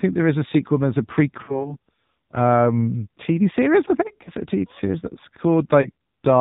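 Throughout, the speech carries AMR narrowband mobile codec damage. Nothing survives above 4 kHz, so a spectrogram shows a hard ceiling there, and the clearly buzzy, synthetic timbre fits a low mode around 7.4 kbps, where few pulses are left to drive the vocal tract model.

From 1.44 to 1.76 s come lost AMR speech frames, the sound consistent with two missing 20 ms frames. The decoder repeats its last pitch and vocal tract settings at falling gain, so the sound smears and dips. On the waveform the envelope sags, and on the spectrogram the harmonics flatten briefly.

Single-frame losses follow at 4.24 to 4.31 s, after "series I think" and before "it a", and at 5.82 to 5.91 s, after "series that's". Each is heard as a short warble or dip.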